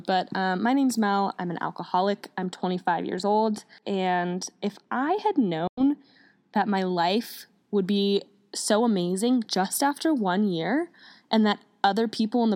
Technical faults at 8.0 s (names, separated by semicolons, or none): none